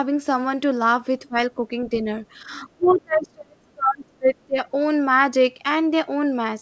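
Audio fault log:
1.2–1.36 s, 1.89–2.25 s, 2.42–4.58 s, speech suppressed in double talk: the speech dips sharply at 1.2 s, by about 20 dB for a brief moment. It sags only slightly, around 5 dB, between 1.89 and 2.25 s. From 2.42 s it repeatedly falls away by as much as about 35 dB, with roughly a second and a half lost in pieces. The likely cause is an echo canceller facing simultaneous talk and pulling down the wanted speech along with the echo.
2.85–2.94 s, other side's voice leaking through: a faint, short scrap of a second voice surfaces inside the suppressed stretch, sitting about 25 dB below the main speech and lasting under a tenth of a second. It is likely far-end audio from the loudspeaker that the echo canceller failed to remove completely. It shares the band-limited sound of the rest of the call, with nothing above 8 kHz, as expected from a 64 kbps G.722 path.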